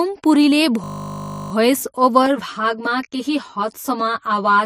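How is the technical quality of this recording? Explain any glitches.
The recording has two clear technical faults.

From 0.84 to 1.52 s, a system hang loop repeats one 20 ms buffer 34 times. The playback froze while the hardware kept cycling, producing a 50 Hz buzz.

From 2.26 s to the end, channel delay causes comb filtering. One channel lags about 10 ms before the mono sum, cutting evenly spaced notches from around 50 Hz upward.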